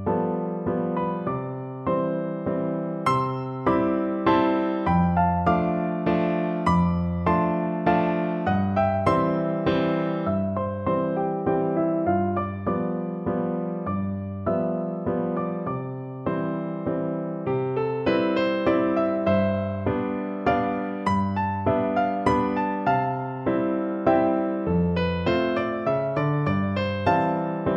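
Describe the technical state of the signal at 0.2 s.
At 0.2 s the signal is intact, with no audible fault at that moment.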